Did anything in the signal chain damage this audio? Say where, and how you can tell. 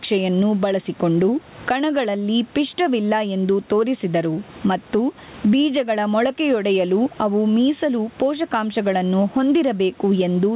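Yes. The trouble is gain pumping right at the mic end. Through the whole clip the gain swings by around 15 dB, pulling loud and soft parts closer together and squashing the sound. That's likely the input gain set far too hot, with a fast limiter clamping down on every peak.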